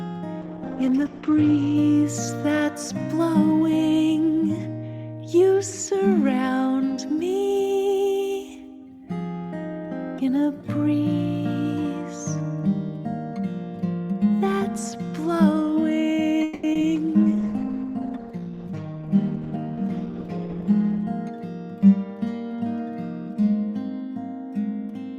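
A call bitrate drop at 0.42 to 1.81 s takes the encoder from 64 kbps to 10 kbps and narrows the bandwidth from 20 kHz to 8 kHz, so the sound turns coarse and muffled for about 1.3 s. Because it is dulled and rough rather than interrupted, it differs from the dropouts later on. At 16.43 to 16.65 s a call audio freeze holds the last sound as a fading buzz for 200 ms, with no silence. The audio then resumes where it stopped, so nothing is lost. A jitter buffer that likely ran empty while packets were delayed would explain this. Unlike concealed loss, it inserts a gap rather than removing audio. Short concealed packet loss follows at 16.73 to 16.77 s and 16.81 to 16.85 s. Each is a 20 ms smear or wobble where real audio is missing and was patched over, much briefer than the freeze. A second call bitrate drop runs from 16.97 to 21.11 s, falling from 64 kbps to 13 kbps and leaving the sound rough and watery for about 4.1 s.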